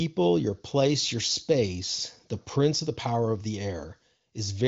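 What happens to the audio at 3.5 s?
Nothing goes wrong at 3.5 s: the speech there comes through intact, carried cleanly by the AMR wideband (HD Voice) codec at 23.05 kbit/s with at most faint codec damage.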